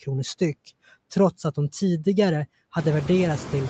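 From the start of the clip to its end, a noise suppressor in the call chain is pulling down every frequency band it judges to be steady background noise, frame by frame, cutting it by about 20 dB. These noise suppressor artifacts make the room noise drop away in the gaps between words and swell back up underneath the speech. After roughly 3 s, the room noise itself rises.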